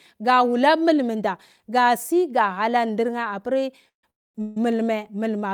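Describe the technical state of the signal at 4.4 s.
Around 4.4 s the speech sits between two call audio freezes, likely from packets stalling until the jitter buffer ran dry. From 4.10 to 4.36 s the receiver fills about 244 ms, almost all of it silence, which shows as a flat waveform and a blank spectrogram column. From 4.42 to 4.57 s, 145 ms is padded with a fading buzz or hiss stretched from the last sound, seen as smeared horizontal bands. Nothing is lost, but each freeze pushes the audio later.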